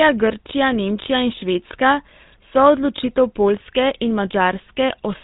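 It's a speech recording that's been through the GSM full-rate codec for its whole length, and the damage is plain to hear. The voice has that buzzy, gravelly edge you get when the codec rebuilds the vocal tract from a coarse, regularly spaced pulse excitation, and nothing survives above about 3.8 kHz, so it sounds dull and boxed-in. The amount of grit fits the old 13 kbps full-rate coder.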